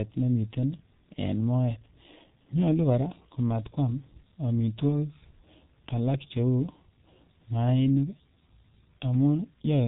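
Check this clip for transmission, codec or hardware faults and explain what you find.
The speech has heavy codec damage throughout, and nothing else stands out.

G.723.1 codec, throughout: the coder describes the voice with a slowly updated model over 30 ms frames, and the spectrum stops at 3.8 kHz, which fits its 6.3 kbit/s mode. The speech comes out dull, hoarse and muffled, with smeared consonants.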